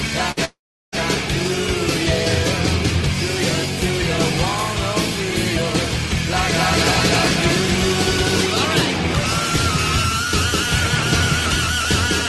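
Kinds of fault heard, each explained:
burst of packet loss: A short run of packets never arrived, so the receiver stretched the last sound for about 53 ms, then skipped ahead, losing 40 ms.
long network dropout: Audio likely stopped arriving from 0.45 to 0.95 s; a fading fill gives way to about 370 ms of silence, and 480 ms is lost.
doubled audio track: A second copy, likely from a slower capture path, repeats the sound around a third of a second late at similar level, 6.36 to 8.36 s.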